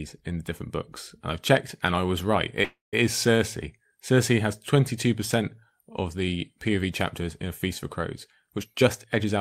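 At 2.64 s, just after "and I was right", the speech stops for about 0.29 s. This is a call audio freeze. A short fading buzz or hiss trails off into about 170 ms of silence. Delayed packets likely drained the jitter buffer. The speech then resumes where it left off, with nothing lost.

From 8.56 to 9.38 s there is a jitter buffer speed-up. The speech runs at about 122% speed with unchanged pitch. It sounds rushed. The receiver trimmed many tiny pitch-period slices, roughly a fifth of a second in total, to shed the built-up delay.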